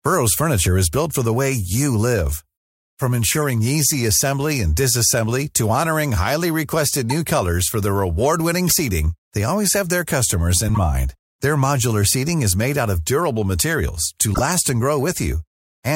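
Five short chirps or bursts of noise cut through the speech at 3.31, 7.09, 8.67, 10.68 and 14.34 s, each under an eighth of a second. That's a corrupt frame decoded: flipped bits in a few compressed frames throw energy into the wrong frequencies. The 8.67 s burst is the loudest of the five.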